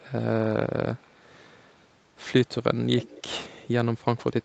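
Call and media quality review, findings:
Echo leak, 1.01–1.23 s: faint delayed copy of the speech, very low, well under the main signal, lagging about 282 ms. Likely far-end echo canceller residue from loudspeaker playback. Distinct from reverb: discrete repeat at fixed delay, not smooth decay.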